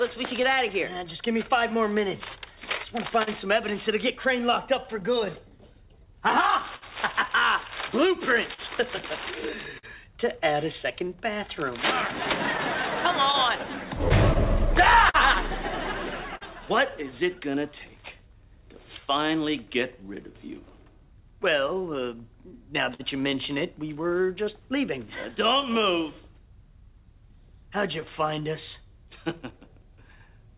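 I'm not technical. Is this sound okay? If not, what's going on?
No. Three things are going on.

Throughout the clip, the sound has small, uneven timing hiccups. This is clock drift between sender and receiver. The sending device's internal clock ran a few percent slower than the receiving device's, so audio arrived a little more slowly than it was being played. The receiver keeps running short and has to make up the difference.

The receiver makes up that difference with repeated timing corrections, from 0.03 s to 30.48 s. It stretches the sound by repeating tiny pieces, so playback runs at about 98% speed. All of these corrections push in the same direction and are unevenly spaced. Together they add roughly half a second to the clip.

There are also scattered short gaps. From 0.19 s to 23.01 s there are around forty of them. Each one is a brief tick or smear where a small piece of audio arrived late or went missing, and the receiver covered the hole by continuing the last bit of sound. 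The longest is about 50 ms, and together they add up to under a second. From 25.47 s to 30.3 s there are about ten more, all very short, none longer than about 15 ms.

The call connection itself carries nothing above 4 kHz, which gives the sound its telephone-like tone.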